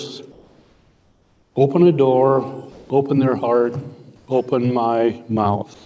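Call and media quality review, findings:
Comfort noise in place of the background, 0.32–1.56 s, 4.16–4.28 s, 5.74 s to end. Background turns steady and featureless, about 2 dB, about 1 dB, then no quieter. Likely DTX at sender, receiver synthesising noise. No sound lost, unlike a voice-detector dropout.

Sound dropped by the voice detector, 2.72–2.90 s. Roughly 110 ms of actual sound replaced by steady noise, 180 ms in total. Likely sender VAD misclassifying quiet sound as background. Differs from comfort-noise pauses: real content cut, not just background texture. Band-limited to 8 kHz throughout, fitting a G.722-type wideband call codec.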